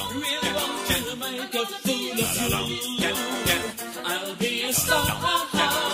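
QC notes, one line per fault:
No faults found on listening; nothing to log.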